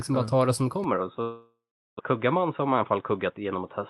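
At 0.84 s, right after "bara ta det som", the speech abruptly turns dull and boxy, with no gap and no noticeable jump in loudness. This is most likely an input switched to a poorer device, such as a second microphone or a headset's call profile. On a spectrogram, everything above 3.8 kHz disappears from that moment to the end of the clip, although the Opus call path could carry content up to about 12 kHz. A faint new noise floor, roughly 50 dB below the speech, sits underneath.

From 1.21 s to 2.01 s the sound breaks up in what is likely a long network dropout. The receiver fills the gap for about 0.78 s. First it repeats the last sound as a buzzy, fading tail, which shows on a spectrogram as smeared, repeating harmonics shrinking in the waveform. Then about 0.39 s of near-flat silence follows. When speech resumes, about 0.62 s of it is simply missing, and playback now runs roughly 0.15 s behind where it was.

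Between 2.13 s and 3.45 s a jitter buffer speed-up drains that extra delay. Short pitch-period slices are cut out again and again, so the speech runs about 10% fast at unchanged pitch and sounds hurried. Roughly 0.15 s is removed in total. The waveform shows slightly compressed syllables with periodic tiny splices, while the harmonic spacing on the spectrogram stays the same.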